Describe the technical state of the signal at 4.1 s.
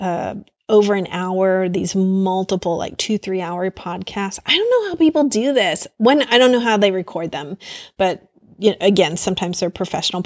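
At 4.1 s the speech signal is intact, with no audible dropout, distortion, glitch or other technical fault.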